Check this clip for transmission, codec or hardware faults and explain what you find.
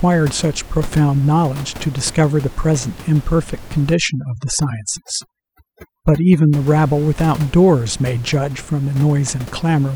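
One fault appears: overdone noise removal from 3.94 to 6.53 s. A noise reduction stage set too aggressively mutes any frequency band resembling its noise estimate, dragging quiet speech detail down too. The background drops and breaks up into twinkling specks. Unlike low-bitrate codec smearing, the artefacts follow the background's level. The steady room noise, about 19 dB below the speech outside that span, is what the tool was attacking.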